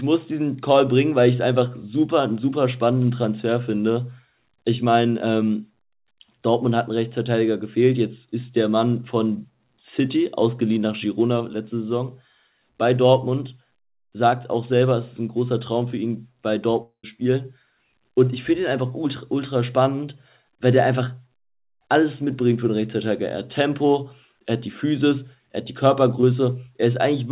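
At 16.82 s the audio stops being real and turns into a continuation of the last sound: a buzzy, hiss-like tail that fades over roughly 0.2 s, followed by about 100 ms of near-silence before normal sound resumes at 17.05 s. About 220 ms of material is simply absent. This is a long network dropout. A gap in arriving audio is the likely cause, with the receiver extrapolating what it last had until that ran thin and then giving up.

Between 26.21 and 26.25 s there is a brief smear, a wobble where the sound seems to hang for an instant before rejoining. This is short concealed packet loss. Roughly 20 ms of audio did not reach the decoder in time, and the receiver papered over the hole with about 13 ms of synthesized continuation, then crossfaded back into the real signal. It is heard through the same band-limited call path, which has nothing above 4 kHz, consistent with G.711 A-law at 64 kbps.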